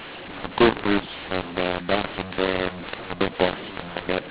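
Throughout, mu-law and A-law are mixed up: mu-law telephone samples decoded as A-law scramble levels, so speech turns harsh and pauses fill with noise, unlike clipping.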